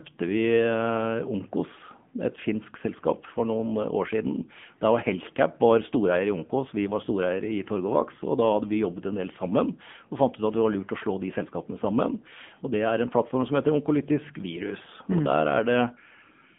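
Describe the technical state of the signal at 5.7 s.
At 5.7 s the AMR narrowband mobile codec is in effect, as it is across the whole clip. The signal has been reduced to 8 kHz sampling and rebuilt by a vocal-tract model driven by sparse pulses, so the voice sits in a telephone band of about 150 Hz to 3.5 kHz with nothing above 3.6 kHz. The damage is plainly audible: a thin, buzzy, synthetic timbre that fits a low AMR-NB mode around 8 kbps.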